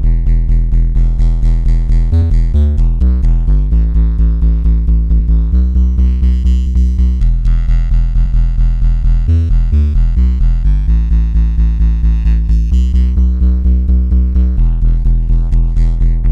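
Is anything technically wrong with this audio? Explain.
Yes. Compressed frames are skipped at 2.21 s and 8.24 s. The audio jumps ahead by whole 26.1 ms frames, losing about one and then about two frames. Each join is heard as a brief blip or click, depending on the codec.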